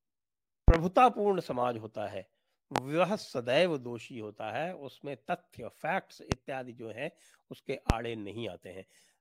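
A sudden voltage step or pulse, likely from a plug, switch, static discharge or driver glitch, is being added to the signal, and the downstream circuitry shapes each pulse into a brief burst. The result is a loud pop at 0.68 to 0.78 s, heard as two pops in quick succession, then single pops at 2.76 to 2.80 s, 6.32 to 6.36 s and 7.90 to 7.94 s. Each peaks roughly 25 dB above the speech, which carries on underneath.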